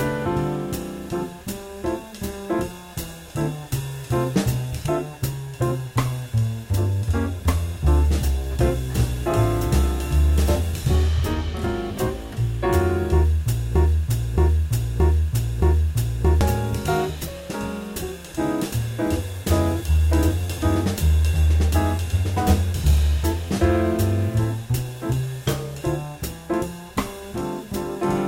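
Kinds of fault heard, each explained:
Broken-record loop: from about 13.76 s to 16.41 s the same piece of sound, roughly 0.62 s long, plays back to back four times with no change between passes, like a stuck record. That points to a stall somewhere in the chain, most likely the player, encoder or stream hanging on its last fragment and resending it. Whatever should have played during those two and a half seconds is simply gone.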